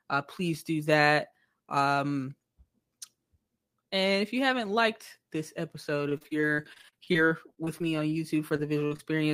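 Right after "haven't liked this episode", from 6.09 to 8.15 s, the speech turns choppy: repeated packet loss (robotic sound). Short holes, none longer than 34 ms, arrive one after another, each patched by extending the last sound, and those patches cover about a fifth of the stretch. A second burst runs from 8.48 to 9.01 s, with gaps up to 41 ms. Unlike a single dropout, the closely spaced repair fills give the buzzy robotic texture.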